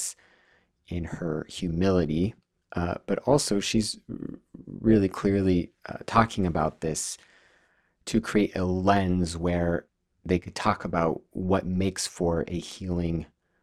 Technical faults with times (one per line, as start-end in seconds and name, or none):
0.00-13.63 overlap-add ripple